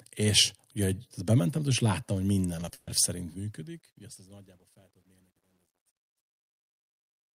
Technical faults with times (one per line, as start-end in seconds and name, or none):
2.65-2.73 short concealed packet loss
2.73-2.89 burst of packet loss
3.06-7.36 truncation distortion on a fade